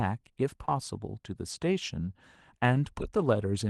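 Short concealed packet loss, 0.65 to 0.69 s: about 20 ms of this speech did not reach the decoder in time, so the receiver improvised the gap by extending the preceding sound, following its pitch where it was voiced or substituting shaped noise where it was not, then crossfading back into the real signal. The result is a brief smear or wobble in the speech.

Lost packet rebuilt from error correction, 0.67 to 0.69 s: overlapping the end of that gap, another 20 ms stretch, consistent with a single lost packet, was restored from a low-bitrate backup copy carried inside the following packet. Because the copy is coarser, this moment sounds rougher and noisier than its surroundings, with no silence, on a Opus call path whose top end already stops near 12 kHz.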